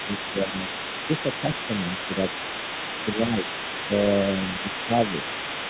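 From start to finish a second, far-end voice sits faintly under the speech, roughly 10 dB down: the other side's voice leaking through, likely from incomplete echo cancellation. Brief level dips, mostly a few dB but near 10 dB at 0.44 to 0.64 s, also hit 0.05 to 0.12, 1.41 to 1.47, 3.16 to 3.46 and 4.87 to 4.93 s. This is speech suppressed in double talk, likely the canceller ducking overlapping speech. The band stops at 4 kHz, which fits a narrowband telephone codec.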